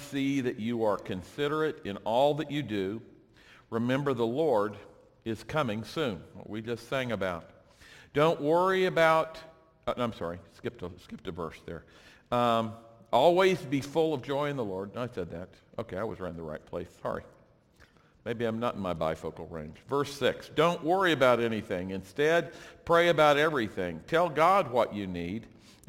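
All the way through there's crude rate conversion, likely a 44.1 to 48 kHz change done by repeating nearest samples, leaving a gritty inharmonic fizz roughly 30 dB down.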